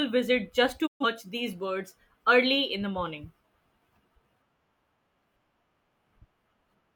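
At 0.86 s, just after "visit just", the speech fades out over about 20 ms and goes silent. This is a digital broadcast dropout. The receiver stopped getting usable frames, either from signal loss or failed checksums, and muted its output. The hole lasts until 1.05 s, and the programme returns at "these birds early in". About 128 ms of sent audio is simply gone, which fits roughly three lost frames. Nothing is repeated or smoothed over.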